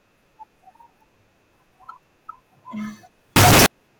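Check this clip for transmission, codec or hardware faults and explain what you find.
One fault appears near the end of the speech. From 3.36 to 3.66 s the sound becomes a very loud, harsh distortion. Quiet moments are as loud as everything else. The likely cause is signed and unsigned mixed up, which fits 16-bit samples. The top bit flips. Every zero crossing then jumps across the full range.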